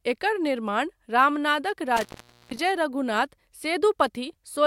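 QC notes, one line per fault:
1.97 to 2.59 s, intermittent contact: the speech drops out abruptly, with crackle at the start and end of the gap. The line is fully open for about 465 ms, leaving faint hiss. That's what a loose plug or cable sounds like when the connection breaks for a moment and then catches again. The crackle comes from the contacts scraping as they part and meet, so the cut isn't clean.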